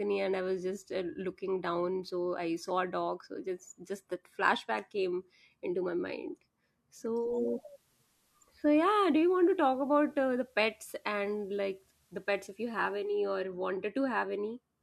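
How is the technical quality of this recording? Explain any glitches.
One glitch stands out. From 7.12 to 13.26 s, faint hiss rises under the speech: digital radio blending to analogue FM, a third-second cross-fade each way with unchanged level.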